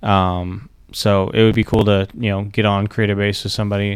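From 1.52 to 1.81 s the speech breaks into processor overload crackle. The processor repeatedly missed its buffer deadlines, and the skipped blocks, apparently around 5 ms each, leave a gritty tearing. The waveform shows hard-edged gaps, and the spectrogram shows scattered vertical broadband streaks.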